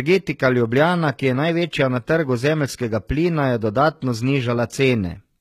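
Speech throughout, with plainly audible HE-AAC compression: gritty, metallic treble likely from spectral band replication at a low bitrate near 20 kbps. A spectrogram shows copied upper bands ending sharply at 14.9 kHz.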